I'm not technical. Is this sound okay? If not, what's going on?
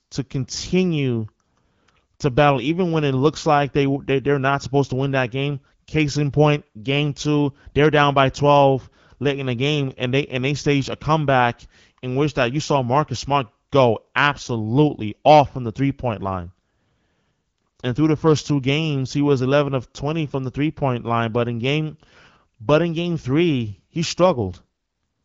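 Yes, nothing here sounds wrong.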